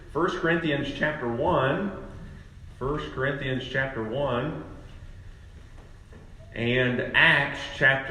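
No technical faults are audible.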